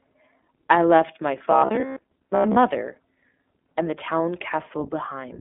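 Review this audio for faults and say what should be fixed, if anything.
Throughout the speech the sound is narrow, rough and slightly synthetic, with nothing above 3.8 kHz. This is plainly audible iLBC codec damage. The codec codes each 20 ms frame on its own, consistent with its 15.2 kbps mode. Use a wideband codec such as Opus where both ends support it.

From 1.51 to 2.56 s the speech turns into a rigid, metallic buzz near 66.7 Hz that still loosely follows the speech. This is robotic sound from repeated short buffers, likely caused by late audio being replaced by repeats of the last 15 ms while most of the real audio was skipped. Enlarge the jitter buffer, or use packet-loss concealment that fades out instead of looping the same buffer.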